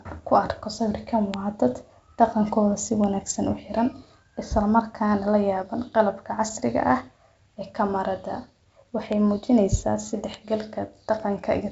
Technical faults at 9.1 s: bit error spike

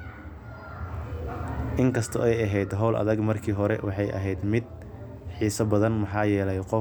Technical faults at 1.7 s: none

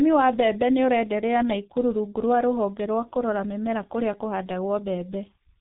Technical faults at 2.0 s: G.723.1 codec

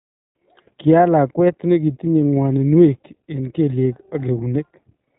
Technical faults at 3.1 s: iLBC codec

